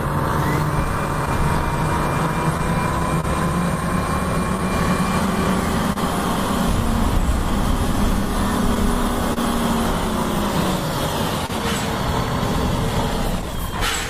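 From the start and running to the end, clock drift between sender and receiver leaves small timing hiccups at uneven intervals. The sender's clock runs slow, by roughly one and a half percent, so the receiver's jitter buffer keeps draining and the receiver has to repeat short slivers of sound to keep playing. Each one is a faint stutter or a slight drag in the rhythm. A waveform shows occasional tiny repeated segments, and a spectrogram shows brief smeared columns scattered irregularly across the clip.

Between 1.25 and 3.25 s, scattered short gaps appear: about four lost or late packets, the longest around 30 ms. A second cluster of about three falls between 4.57 and 5.98 s, with the longest again around 30 ms. The receiver fills each hole by carrying the last sound forward, so nothing is missing outright. The result is quick ticks or smudges in otherwise clear audio. On a spectrogram these are thin vertical patches where the frequency content freezes briefly. 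The waveform shows short stretches that echo the cycles just before them.

At 9.34 s and again at 11.46 s, a short stall from a late packet holds the sound in place. At 9.34 s the stretch lasts 26 ms, and at 11.46 s it lasts 31 ms. In both cases the jitter buffer ran dry and the receiver extended the last sound until the packet arrived, then picked up where it left off. Each stall is a small sustained drone with a faint buzz or dip. A spectrogram shows flat horizontal streaks, and the waveform shows a short, slightly attenuated periodic repeat.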